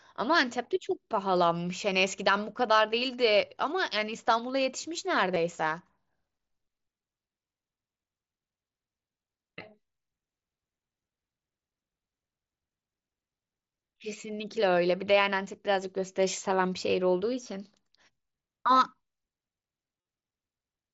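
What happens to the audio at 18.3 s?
Nothing goes wrong at 18.3 s: the speech continues intact through the Bluetooth mSBC headset link, with only its usual wideband limit and light codec texture.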